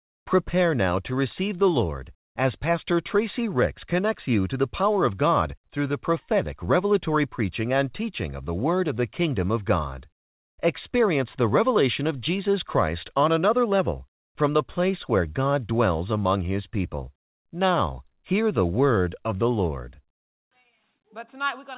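No technical faults can be heard in this speech, which arrives through a call path that carries nothing above 4 kHz.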